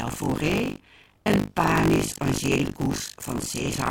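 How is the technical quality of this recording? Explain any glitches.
The recording has one fault, buffer tearing, throughout. The writing program and the playback hardware have drifted out of step, so roughly a third of each 20 ms period repeats audio from about 70 ms earlier. The hard joins produce a robotic 50 Hz rattle. Unlike mains hum, it vanishes whenever the sound stops.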